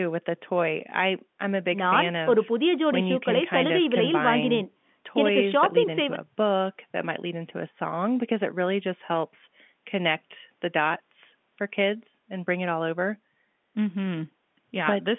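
Nothing here goes wrong: the speech carries the narrow, phone-line character of G.711 coding, with nothing above about 3.7 kHz, which is simply how that format sounds rather than anything amiss.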